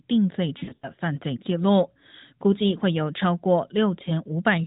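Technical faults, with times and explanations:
0.58–0.92 s, lost AMR speech frames: the speech stutters and smears for about a third of a second, with held, warbling patches and dips in level, the longest lasting 80 ms. Nine 20 ms frames failed their checksum, scattered across roughly 240 ms. For each one, the narrowband decoder repeated the last good pitch and vocal tract settings at falling gain, so the sound stretches and fades, then returns briefly weak.
4.04–4.11 s, lost AMR speech frames: a short dip and wobble from a single lost 20 ms frame, bridged by the same repeat-and-fade concealment.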